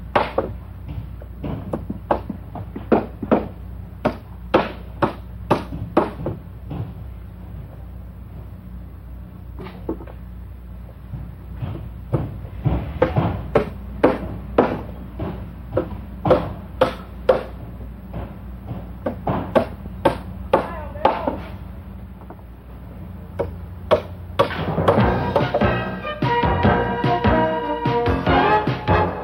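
No technical faults can be heard anywhere in this audio.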